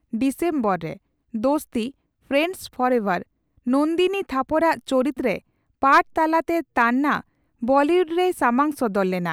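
Nothing stood out on listening to this recording of speech.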